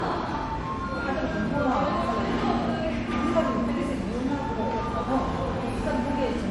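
From start to finish the sound carries the marks of transcoding between lossy codecs, likely an MP3 encode at 48 kbit/s later re-encoded as Opus at 48 kbit/s. Nothing survives above 12 kHz, the lowest cut-off in the chain, and the second encoder spends its bits reproducing the first one's artefacts while adding its own. What separates this from a single low-bitrate encode is the mix: two distinct kinds of artefact heard layered together rather than one consistent texture.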